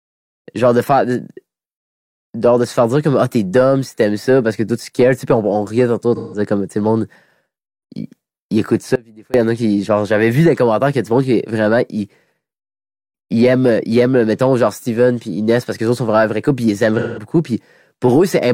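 At 6.15 s, just after "riait tantôt", AAC frame loss with concealment hits for about 0.17 s, which fits four lost frames. The decoder patches the gap from the last good spectrum. The result is a brief smeared, phasey blur before "comme tu le monde".

At 8.96 s, after "il écoute", the speech drops out abruptly for about 0.38 s. Only a faint residue remains, roughly 25 dB down. The likely cause is an audio dropout with the path still live. It returns at "il y en a".

At 16.99 s, after "vrai puis ils aiment", the same frame loss recurs for about 0.17 s, again concealed as a short smeared patch.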